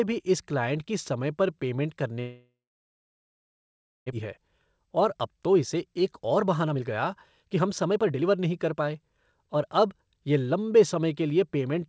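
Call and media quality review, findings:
Long network dropout, 2.2 to 4.14 s. Sound cut out. The last bit of speech smeared into a fading buzz, then near-silence for about 1.5 s. Likely cause: packets lost in transit. Receiver concealment filled the gap. About a second of speech never played. Speech resumes later without the missing part, and delay jumps by roughly a second.

Jitter buffer speed-up, 4.22 to 6.96 s and 7.42 to 9.68 s. Speech hurried at normal pitch, about 116% then 118% speed. Receiver trimmed pitch-period slices repeatedly to drain the excess buffered audio, roughly 0.4 s per stretch. Rhythm rushed. G.722 call path cuts everything above 8 kHz.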